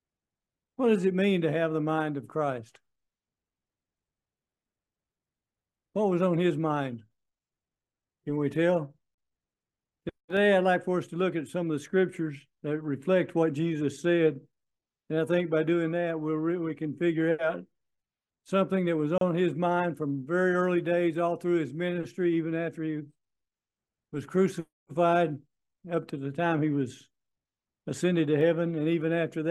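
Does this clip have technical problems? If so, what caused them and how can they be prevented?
Yes. There are two short silences at joins between separately encoded pieces: one at 9.15 s lasting about 35 ms, and one at 19.18 s lasting about 32 ms, 10 s apart. Each piece was encoded on its own and the pieces were butted together untrimmed, so the encoder's start-up delay and last-frame padding remain as a gap. Unlike a network dropout, the sound resumes exactly where it stopped with nothing skipped, and the regular 10 s spacing points to segment boundaries. Encoding the material in one pass, or using gapless metadata to trim the delay and padding, prevents this.

At 28.41 s there is a bit error spike. A single sample jumps by a power of two and immediately returns, giving one sharp, broadband tick unrelated to the surrounding sound. An editing click or clipping would follow the waveform or a change in it, but this is an isolated one-sample excursion, which fits a single flipped bit in memory or on a digital link. 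Error-checked transfer and memory, such as checksums on links and ECC RAM, prevent it.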